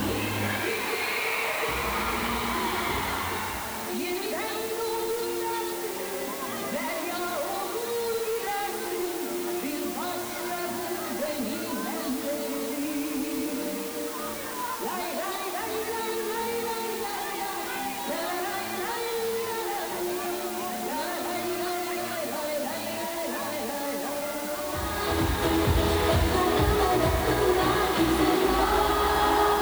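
A steady, even hiss runs under the sound from start to finish, and it's the signature of low bit depth with dither. The audio has been squeezed down to just 5 bits, with dither noise added before rounding, so the quantisation error comes out as flat white noise. The dither stops that coarse error from showing up as distortion, but the hiss sits only about 10 dB below the signal, which is very loud.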